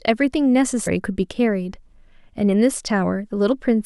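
Damaged data in the compressed stream makes the decoder misread frames and lose sync, giving a brief blip at 0.86 s and again from 3.51 to 3.53 s.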